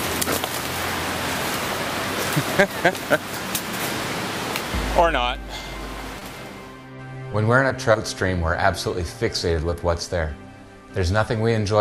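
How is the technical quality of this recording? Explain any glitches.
Three brief glitches break the recording: short concealed packet loss at 6.19–6.23 s, 7.92–7.96 s and 9.70–9.74 s. Each is a quick smear or wobble where about 20 ms of audio never arrived in time, and the decoder filled the gap by extending the preceding sound before blending back into the real signal.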